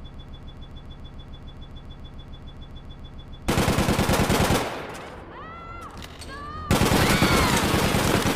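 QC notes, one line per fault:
0.00–3.48 s: broken-record loop. Already under way when the clip opens, a 143 ms fragment repeats exactly, back to back, 23 times before normal playback resumes. This is likely a stalled player, encoder or stream re-sending its last buffered piece, so the intervening audio is lost.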